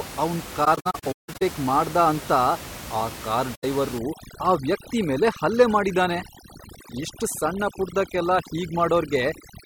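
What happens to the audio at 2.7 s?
At 2.7 s the speech continues intact, with only the room's own background noise, about 14 dB below the speech, audible beneath it.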